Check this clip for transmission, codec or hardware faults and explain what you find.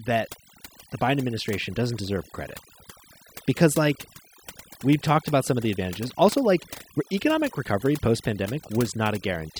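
The one problem here is overdone noise removal, and it runs through the whole speech clip from start to finish. A noise reduction stage was pushed too hard. It shuts down individual frequency bands whenever they sit close to its noise estimate, and the softer bits of the voice get caught in that along with the noise. So the gaps between phrases fall to near silence sprinkled with little twinkling specks.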